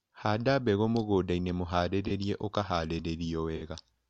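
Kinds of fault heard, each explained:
Corrupt frame concealed: the decoder caught damaged frames and masked them. Concealed frames follow "mbegũ mũgũndainĩ" at 2.07–2.11 s, and recur at 3.56–3.63 s.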